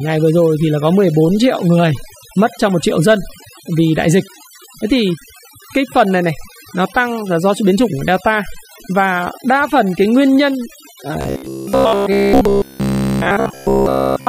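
From the start, the speech carries the marks of overdone noise removal. The background drops and breaks up into twinkling specks. A noise reducer set far too hard has shut off individual frequency bands whenever they came close to its noise estimate, taking the quieter parts of the voice with them. Unlike a simple low-pass filter or gate, the loss is patchy across frequencies and flickers from moment to moment.

From 11.21 s to the end at 14.28 s, the speech turns into a rigid metallic buzz locked at about 66.7 Hz. It still follows the rough shape of the speech, but none of it sounds new. This is robotic sound from repeated short buffers. The likely cause is new audio arriving too seldom, so the last fragment was replayed over and over while the real audio was skipped. A 66.7 Hz repeat points to a fragment of about 15 ms. What sets it apart from the noise-removal damage is the fixed pitch that does not follow the speech.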